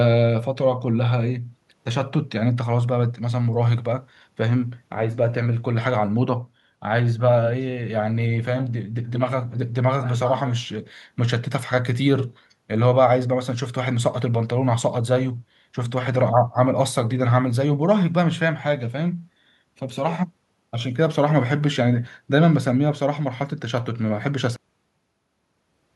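The final buffers were never written, giving a cut-off end: at 24.56 s the speech stops mid-sound and drops straight to digital silence, with no decay.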